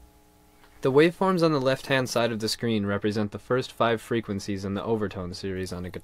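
From 2.53 s to 5.56 s, a de-emphasis stage is applied wrongly: a treble-cut filter meant to reverse pre-emphasis acts on a signal that never received that boost, or cuts a second time. The result is a gentle, continuous roll-off above the midrange, about 8 dB down at 10 kHz relative to 1 kHz. Across that span the audio turns dull and muffled, losing its brightness and crisp detail.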